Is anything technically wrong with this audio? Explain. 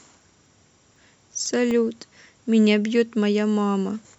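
Yes. From 0.21 to 1.71 s, periodic USB or driver dropouts: every 0.25 s, about a millisecond of speech becomes silence, heard as regular ticks and seen as evenly spaced waveform gaps and vertical spectrogram lines.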